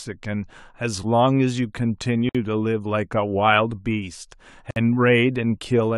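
At 2.29 s and again at 4.71 s the speech drops into a roughly 55 ms hole, a gap at a join of encoded pieces where encoder padding wasn't trimmed.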